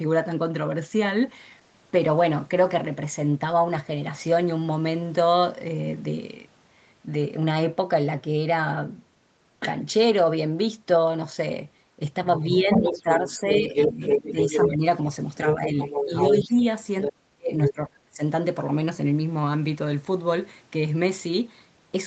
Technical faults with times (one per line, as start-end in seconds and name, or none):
12.38-14.84 speech suppressed in double talk
12.44-14.69 other side's voice leaking through
15.36-16.61 other side's voice leaking through
15.54-16.56 speech suppressed in double talk
17.01-17.10 other side's voice leaking through
17.08-18.21 speech suppressed in double talk
17.63-17.73 other side's voice leaking through